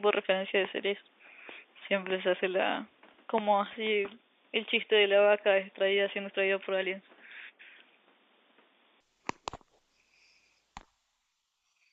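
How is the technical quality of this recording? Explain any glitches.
From the start until 9.0 s the speech sounds dull and boxy, with nothing above 3.6 kHz, a new noise floor roughly 40 dB down, and a level about 5 dB different. It then clears with no gap, likely from the input switching to a poorer device and back.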